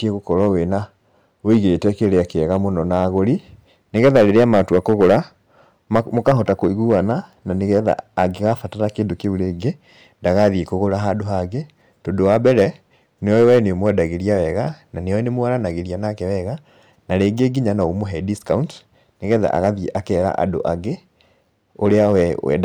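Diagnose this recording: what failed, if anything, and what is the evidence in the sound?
Hard clipping runs through the whole speech recording. The signal was driven about 8 dB past what a stage could pass. That is most likely the converter input, or a sample-format conversion with too much gain ahead of it. The loudest syllables have their peaks sliced flat. Roughly one percent of the samples went past that stage's limit. Those flat tops add high harmonics, heard as a crackly edge on the peaks.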